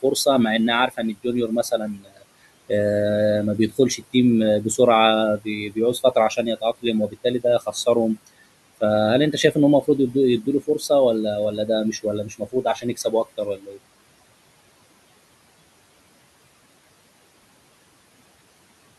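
Noise suppressor artifacts run throughout: the suppressor pulls the steady room noise down by about 21 dB between phrases, leaving the background pumping around the speech.

Speech cut by the noise suppressor occurs at 0.88–2.24 s, 3.58–4.14 s, 5.38–8.28 s, 9.32–10.82 s and 11.57–13.79 s. The suppressor treats stretches of speech as noise and drops them by up to about 21 dB, so those parts sound swallowed and faint.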